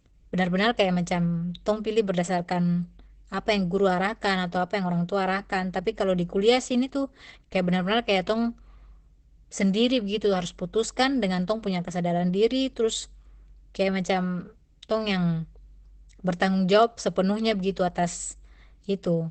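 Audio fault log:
Throughout, Opus compression: the speech sounds muffled and hoarse with nothing above 8.5 kHz, heavy damage that points to a low-rate speech mode, likely around 12 kbps.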